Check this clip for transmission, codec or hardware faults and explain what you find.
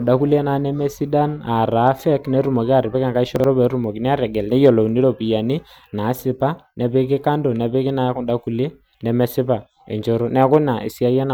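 One transmission fault is present. Chunks out of order, 3.36 to 3.44 s: a 40 ms chunk arrived one chunk late and played after its successor, giving a brief jumbled stretch of speech.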